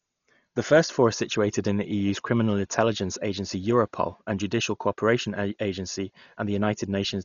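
From start to finish the speech sounds dull, with nothing above about 6.9 kHz, plus rough, fluttery noise hanging around the voiced sounds. That's likely heavy Dolby Digital compression at a starved bitrate, near 40 kbps, where empty frequency lines get filled with dither noise.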